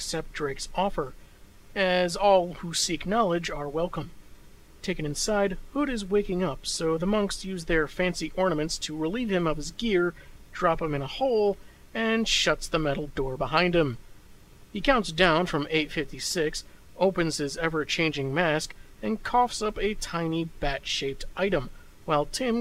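No technical faults can be heard anywhere in the clip. Nothing in the audio calls for a timestamp or a repair.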